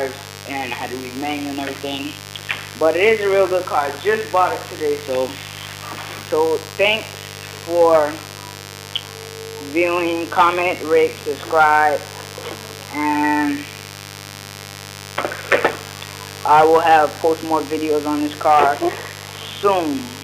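A steady, raspy buzz runs throughout, sitting not far below the sound: mains buzz, switching spikes on 50 Hz power spraying harmonics up into the kilohertz range.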